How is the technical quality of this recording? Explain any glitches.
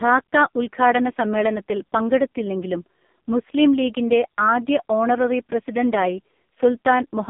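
Technical quality is poor. Throughout, the speech carries heavy AMR narrowband mobile codec damage. Everything above 3.6 kHz is gone, leaving a thin phone-line band. The vocal-tract model is starved of bits, as at AMR-NB's lowest modes near 5 kbps, so voices come out buzzy and synthetic.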